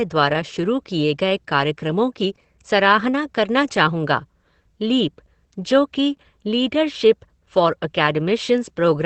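Throughout the speech, Opus voice compression is plainly audible. The sound points to Opus running its SILK linear-prediction coder in wideband mode at a low rate, consistent with about 12 kbps and 20 ms frames. The excitation is coded coarsely, so the voice takes on a grainy, synthetic texture. On a spectrogram, energy stops at a hard horizontal ceiling at 8.4 kHz with nothing above it. Harmonics below that ceiling look smeared rather than crisp.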